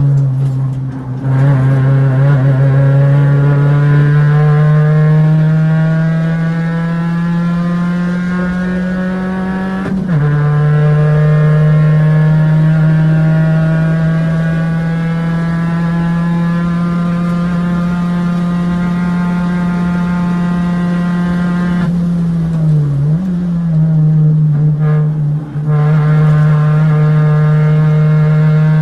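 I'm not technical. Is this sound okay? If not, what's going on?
No, not entirely. It went through an internet call link, and three kinds of hiccup show up.

Repeated stalls (stutter), from 4.11 to 6.36 s: the pieces of audio kept arriving a little late, so the receiving end ran dry 29 times. Each time it briefly stretched the last bit of sound to cover the wait, never longer than 14 ms, adding about 0.31 s in total. Nothing is lost, but the sound drags and catches in a stuttery way.

Jitter buffer slow-down, from 6.37 to 7.36 s: just after the stalls, the receiver's small waiting store of audio was low. To refill it, the receiver repeated tiny slices of sound, adding 150 ms. The audio plays at 86% speed without dropping in pitch, so it sounds drawn out.

Jitter buffer speed-up, from 9.31 to 10.73 s and again from 25.55 to 26.07 s: here the waiting store held too much, so the receiver trimmed tiny slices to catch up, roughly a sixth of a second the first time and well under a tenth the second. 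The sound runs at 109% and then 114% speed with unchanged pitch, and it feels briefly rushed.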